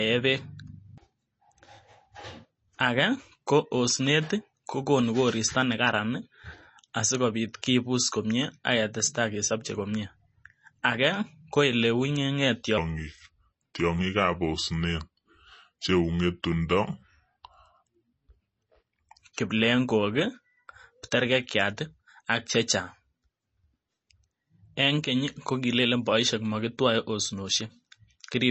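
Speech, with two audible problems. Throughout, the sound has a watery, swirly quality with plainly audible codec damage, and nothing is present above 8 kHz. This is likely MP3 compression at a low bitrate, consistent with about 32 kbps, where the encoder drops weaker frequency lines and cuts the treble. On a spectrogram this appears as a hard ceiling at 8 kHz with patchy, flickering blocks of energy below it. From 12.78 to 19.18 s a section plays at the wrong speed, at 0.795 times normal, so it sounds slow and deep, roughly four semitones lower. The likely cause is playback or editing against the wrong clock. On a spectrogram, the harmonics in that stretch sit visibly lower and spread further apart in time, and the changes at the section's start and end show as abrupt shifts.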